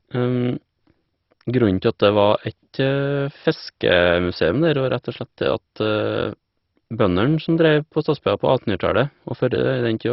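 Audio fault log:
Throughout: MP2 compression. The speech is dull and gurgling, with nothing above 5.6 kHz, likely from heavy MPEG Layer II coding at what sounds like about 32 kbps. Starved of bits, the upper sub-bands switch off, while the remaining bands are coarsely quantised and flicker granularly.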